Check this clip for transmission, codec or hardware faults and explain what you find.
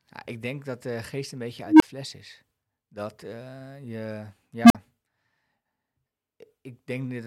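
An unstable filter fault occurs twice in the speech. A recursive filter runs with coefficients that put it outside its stable region, so each pass feeds back more energy and the output grows until it clips and overflows. From 1.66 to 1.82 s, a tone near 300 Hz swells for 145 ms, then drops to 23 ms of silence. From 4.64 to 4.75 s, a tone near 200 Hz climbs faster, over 57 ms, and then cuts out for 46 ms before the filter resets.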